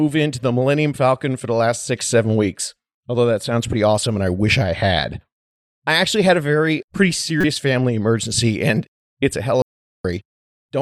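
Damaged data in a compressed stream appears twice in this speech clip, from 3.70 to 3.73 s, between "that sounds" and "awesome and I wish", and from 7.41 to 7.44 s, between "very pretty" and "family emergency and it's". Each lasts about 36 ms, where corrupted bytes made the decoder misread frames, lose sync and hunt for the next valid frame header, leaving a short glitch before clean decoding resumes. Audio dropout to silence follows from 9.62 to 10.05 s, right after "and it's a hell". The sound cuts off mid-flow into roughly 0.43 s of silence with no room tone, and whatever was said then is gone. The likely cause is that the input signal was briefly lost, through a disconnected device, a failed link or an accidental mute, while the recorder kept writing silence.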